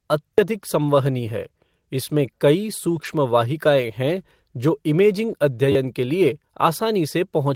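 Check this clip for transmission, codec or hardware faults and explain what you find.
Two kinds of fault are present: a repeated buffer twice and a lost packet rebuilt from error correction twice.

Repeated buffer, at 0.34 to 0.38 s and 5.72 to 5.75 s: new audio arrived late, so one short chunk, which fits a 10 ms buffer, replayed four and then three extra times. About 40 ms and 30 ms of sound were lost. This is heard as a brief buzz. The waveform shows identical repeating cycles with hard joins, and the spectrogram shows horizontal lines about 100 Hz apart.

Lost packet rebuilt from error correction, at 2.87 to 3.13 s and 3.81 to 3.87 s: lost packets were replaced by the low-bitrate copies carried in the packets that followed. That gives 140 ms and 40 ms of rougher, noisier sound with no gap. On the spectrogram these stretches look grainy and smeared but continuous.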